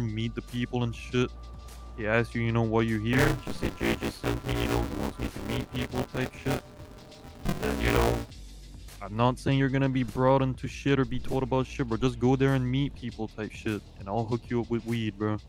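Buffer tearing runs from 3.13 to 8.31 s as a steady robotic buzz at 172 Hz, which fits a 256-sample buffer. About 40% of each buffer replays audio from about 20 ms earlier. Unlike underrun dropouts, there are no silent gaps.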